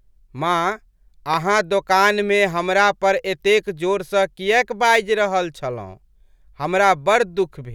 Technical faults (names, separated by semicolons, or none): loud pop